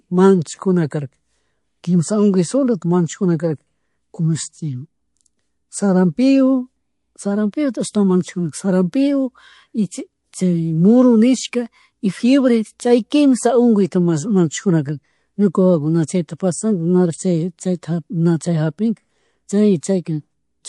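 Throughout, the speech is watery with dulled treble and swirling sibilants, likely from MP3 compression at a low rate, which fits about 48 kbps. Pre-echo appears from 16.37 to 16.40 s, after "wawakuna chayta", and from 19.80 to 19.83 s. Hiss about 11 dB and 14 dB up smears 27 to 28 ms ahead of each attack, pointing to long 48 ms transform blocks without short-block switching.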